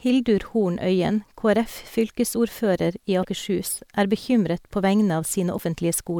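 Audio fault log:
3.20–3.25 s and 5.55–5.60 s, damaged data in a compressed stream: two brief glitches of about 45 ms each break into the speech. At each, corrupted bytes made the decoder misread the frames, lose sync and hunt for the next valid frame header.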